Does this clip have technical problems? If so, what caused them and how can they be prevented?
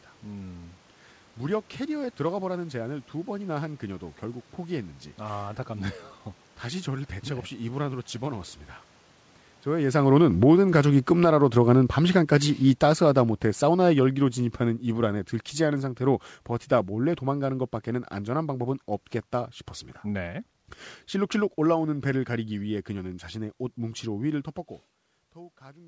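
Yes. Automatic gain falling from 9.99 to 17.61 s: the gain control judged the input too loud, or its background noise too strong, and pulled the level down by about 16 dB, so speech and background sink together. Preventing it means lowering the microphone's input level or moving the talker slightly farther away, so the gain control never sees an overload and has no reason to back off.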